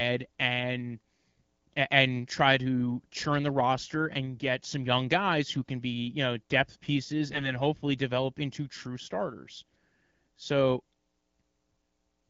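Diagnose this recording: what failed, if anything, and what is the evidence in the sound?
Network-side AMR bit errors flipped weakly protected bits in a few frames, misplacing excitation pulses, so from 7.3 to 7.51 s the speech turns hoarse and gargly.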